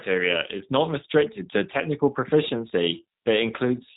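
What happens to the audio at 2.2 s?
At 2.2 s the speech carries G.729 codec damage, as it does across the whole clip. The codec does not send the waveform. It sends a vocal tract filter, a pitch predictor and a few pulses for each short frame, and the decoder rebuilds speech from them. The result is plainly rough and synthetic here. Nothing above 3.8 kHz survives. That sound points to a low-rate VoIP link near 8 kbit/s.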